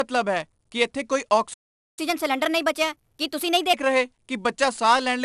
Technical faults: 4-bit ADPCM compression; playback stall; catch-up at higher speed

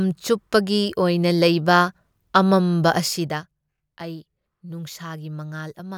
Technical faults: zipper noise

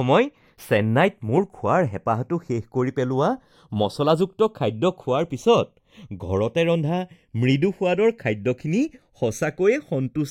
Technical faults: channels drifting apart

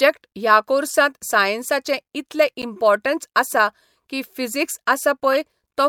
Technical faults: corrupt frame decoded

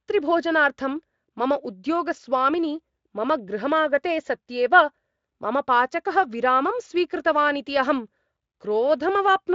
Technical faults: none

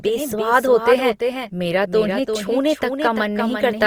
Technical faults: doubled audio track; Opus compression

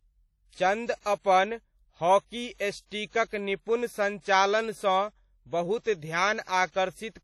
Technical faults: low-bitrate audio saved at a high bitrate

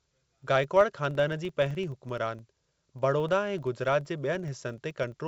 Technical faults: filter restarted on every block

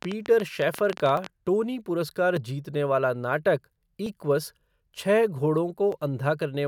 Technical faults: train of clicks; dropped samples

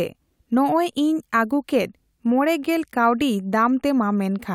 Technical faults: none

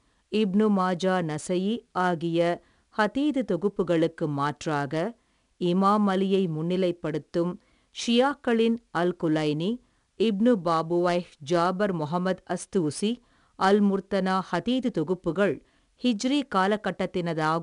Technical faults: 4-bit ADPCM compression

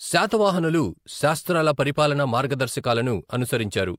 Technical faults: none

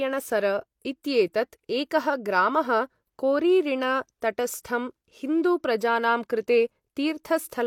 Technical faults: pre-echo

